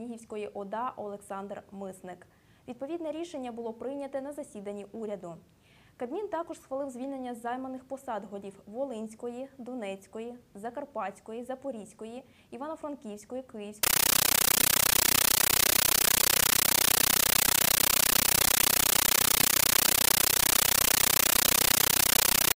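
From 13.83 s to the end at 22.56 s, the audio gives way to very loud, harsh chattering static that pulses about 31 times a second: bursts of noise 13.3 ms long, each followed by silence. This is a compressed stream played as audio. A Dolby Digital (AC-3) bitstream, apparently at 640 kbps, is being passed as ordinary samples instead of being decoded, so each data frame plays as a burst of noise followed by zero padding.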